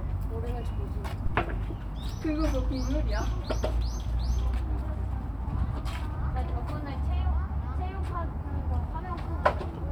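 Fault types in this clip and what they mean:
Phantom power thump: a supply switched on or off on a live input sends a step through the coupling capacitors, giving a deep thump near 1.26 s peaking at about -18 dBFS and decaying within about 24 ms, seen as a low-frequency spectrogram smear and a sharp one-sided waveform excursion.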